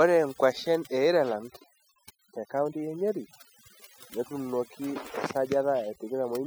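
From start to finish, a noise reduction stage has been pushed far too hard, producing overdone noise removal. It treats any frequency band sitting close to its noise estimate as unwanted and drives that band down or out entirely, taking the softer parts of the speech with it. The gaps between phrases drop to near silence scattered with twinkling specks.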